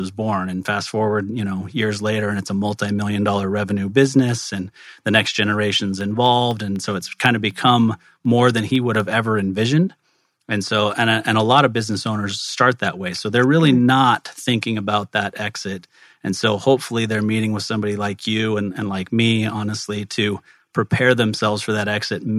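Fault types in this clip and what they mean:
Periodic USB or driver dropouts: between 5.76 and 9.0 s, tiny silent gaps of a fraction of a millisecond cut into the speech every 0.25 s, about fifteen times, as regular ticks. The strict spacing separates them from random clicks or network packet loss.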